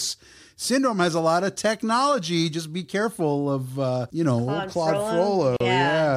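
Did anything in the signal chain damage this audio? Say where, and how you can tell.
Yes. There is a gap at a join of encoded pieces, at the codec stage, from 5.57 to 5.60 s: a silence of about 39 ms breaks continuous speech, with its edges smeared by the codec. The speech resumes exactly where it stopped. Two separately encoded segments were concatenated without trimming, so the encoder's start delay and final-frame padding both survived. A network dropout would instead lose material or fill it with concealment.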